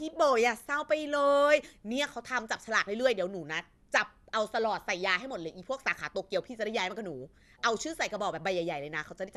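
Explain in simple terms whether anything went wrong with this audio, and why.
The speech was likely saved and re-saved about five times in a lossy compressed format, which fits MP2. This is called generation loss. Each pass strips a little more, so from start to finish it sounds swirly, hollow and smeared, with nothing above 12.5 kHz.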